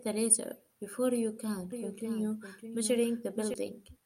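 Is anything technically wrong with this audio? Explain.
Yes. From about 1.72 to 3.54 s there's a doubled audio track: a second, full-band copy of the speech trails roughly 0.7 s behind at about 10 dB down, with no decay or room colour, cutting in and out abruptly. Likely a slower second capture path being mixed in.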